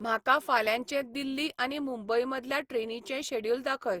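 Speech clip with generation loss throughout: swirly, hollow and smeared, with blurred attacks, likely from about five passes of Opus at around 64 kbit/s, though content still reaches 20.3 kHz.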